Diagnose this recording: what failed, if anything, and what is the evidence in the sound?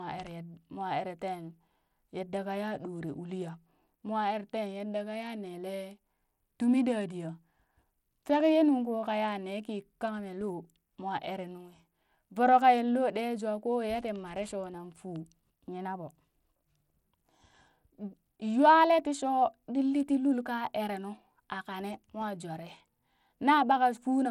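Throughout the speech, the treble thins and flickers, with gritty grain and aliasing on the sound and nothing above 19.4 kHz. The codec stage is the likely cause: Bluetooth SBC compression at a bitrate near 96 kbps, starving the upper sub-bands and coarsely quantising the rest.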